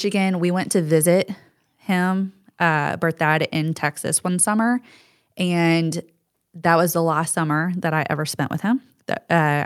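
No technical faults are audible anywhere in the speech.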